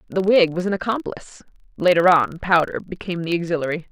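Speech, with a filter restarted on every block throughout the clip. The processing filter discards its internal state at each block boundary and begins the next block from silence, so each block opens with a small transient. Those repeated transients form a steady buzz at 25 Hz, which points to blocks of roughly 40 ms. The buzz tracks the level of the speech, growing louder on strong passages and receding in quieter ones.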